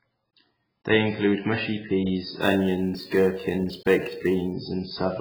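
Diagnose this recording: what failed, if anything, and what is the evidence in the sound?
AAC compression runs throughout the speech. Nothing survives above 5.5 kHz, and the sound is dull and smeared, with a warbling, fizzy edge on sibilants. This is likely a codec stage: AAC-LC starved of bits, which fits heavy quantisation at roughly 12 kbps.

Sample clock jitter appears at the converter from 2.41 s to 4.53 s, just after "include mushy peas". A hiss-like roughness rides on the louder, brighter parts of the speech, roughly 30 dB below the signal. An unstable sampling clock of several microseconds misplaces samples on steep waveform slopes.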